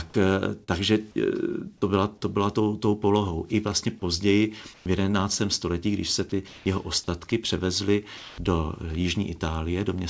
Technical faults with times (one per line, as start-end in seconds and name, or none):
0.64-0.70 short concealed packet loss
4.74-4.86 comfort noise in place of the background
6.48-6.66 comfort noise in place of the background
7.30 sound dropped by the voice detector
8.18-8.38 comfort noise in place of the background